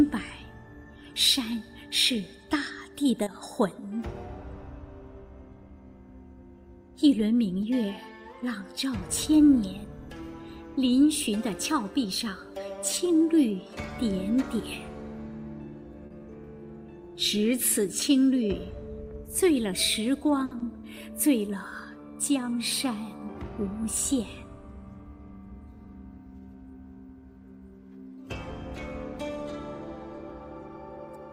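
Late packets emptied the jitter buffer three times, so the receiver held the last sound in place, producing a short stall from a late packet at 3.23–3.28 s (30 ms), 16.06–16.20 s (40 ms) and 20.45–20.53 s (60 ms), each heard as a briefly frozen sound with a slight buzz or dip. Just after the last stall, 40 ms of audio never reached the decoder and was covered by a short concealed packet loss at 20.59–20.62 s, a quick smear. Twice the buffer held more audio than its target, and a jitter buffer speed-up trimmed pitch-period slices to run at 112% speed at 9.01–9.40 s and 29.12–29.60 s, removing around 50 ms and 70 ms respectively, so the sound hurries at unchanged pitch.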